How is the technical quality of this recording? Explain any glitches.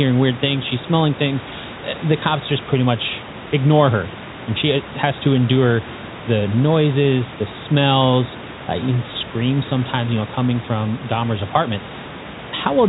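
Nothing stood out on listening; there were no glitches to explain.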